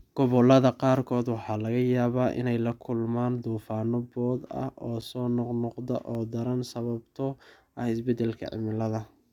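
A speech recording with two blocks of digital silence, where short runs of samples drop to silence with no fade in or out. At 5.01 s, between "duufaanno boodh ah oo" and "soo noqnoqda oo daran", an 8 ms gap is heard as a tick. At 6.15 s, between "ah oo soo noqnoqda" and "oo daran sababtoo", a 1.6 ms gap is heard as a tick or dip. These dropouts point to the output buffer not being filled in time.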